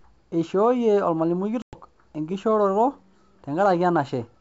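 At 1.62 s there's packet loss on an ADPCM call: roughly 110 ms of audio drops out as a hard-edged gap, probably around ten packets, running to 1.78 s. The decoder's predictor and step size lose track of the sender's, so the speech comes back slightly off for a few tens of milliseconds before settling, over otherwise clean 64 kbit/s G.722.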